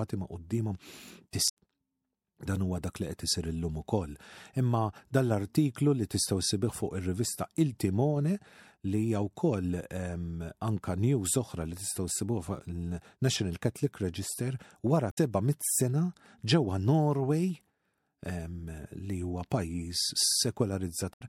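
At 1.45 to 1.57 s, 15.09 to 15.18 s and 21.10 to 21.21 s, the speech is broken by brief glitches, each about a tenth of a second long, the second falling just before "mit sena ġewwa". These are damaged data in a compressed stream: corrupted bytes make the decoder misread or reject those frames and lose sync until it finds the next valid frame header, leaving a short glitch in place of the speech.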